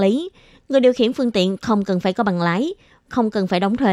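No faults turn up anywhere in this speech recording.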